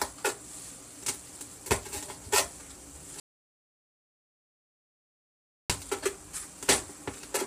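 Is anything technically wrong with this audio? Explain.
Yes, there are two faults in this recording of everyday sounds.

Throughout the clip the sound is rough and grainy, with a noisy haze between tonal components and a thin, artificial-sounding top band. This is heavy low-delay AAC compression, likely AAC-ELD at a low rate that fits around 24 kbps. Its short frames resolve fine frequency detail poorly, so the coder smears energy into the gaps and synthesises the highs. Unlike ordinary lossy coding at a higher rate, the damage is constant and grainy.

From 3.20 s to 5.70 s, about 2.5 s, the audio drops out to silence. The input was likely lost, through a disconnected device, a failed link or a mute, while the recorder kept writing silence. The sound cuts off abruptly and resumes mid-flow, and whatever happened in that span is gone. It is silent with no background tone. That sets it apart from a gated or faded passage, where some residual noise or a gradual level change would remain.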